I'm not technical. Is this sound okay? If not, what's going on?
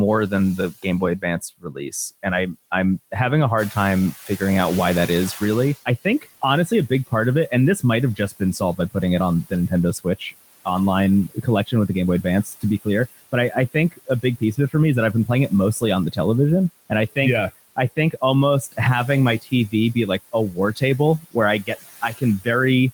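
No. A noise suppressor is cleaning up this speech, and it leaves noise suppressor artifacts through the whole clip. The background is pushed well down, so it dips between words and swells under them.

There's also speech cut by the noise suppressor. The filter mistakes bits of the voice for noise and turns them down. Soft sounds and word endings come out faint or swallowed. This happens at 0.29 to 3.15 s, just before "having a", then 3.71 to 4.41 s, 5.08 to 10.66 s, 11.28 to 16.18 s, 16.9 to 18.79 s and 19.39 to 22.47 s. Each time only short pieces are lost, adding up to under a second.

Around 3.5 s the room gets noticeably noisier. That louder room noise belongs to the recording itself. Right after "having a" comes the noise suppressor catching up. From 3.57 to 5.77 s the louder noise slips through at first. The filter takes about two seconds to adjust, and then the noise sinks again.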